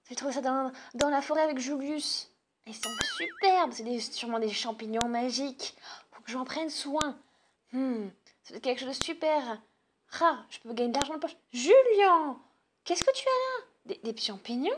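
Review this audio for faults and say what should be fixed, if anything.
File header played as audio: sharp clicks at 1.01, 3.01, 5.01, 7.01, 9.02, 11.02 and 13.02 s, every 2 s, where joined pieces' header bytes play as samples. Strip each WAV header before concatenating or streaming the pieces.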